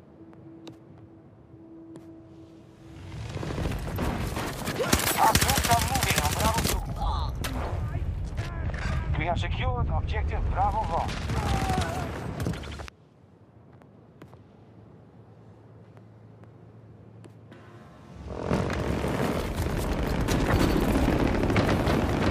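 From 4.07 s to 21.05 s, a click recurs every 4.25 s, likely from clock drift buffer slips that drop or repeat about 70 samples. Each click shows as a vertical spectrogram line and a waveform discontinuity.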